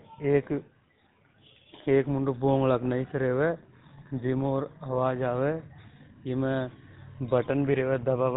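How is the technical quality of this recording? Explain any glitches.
The recording has been through a low-rate phone codec, and it shows. GSM full-rate coding runs the whole way through. It models the vocal tract and drives it with a sparse, regularly spaced pulse excitation, which fits a 13 kbps stream. That gives the speech a plainly audible buzzy, gravelly roughness, and nothing above about 3.9 kHz gets through, so it's dull and boxy too.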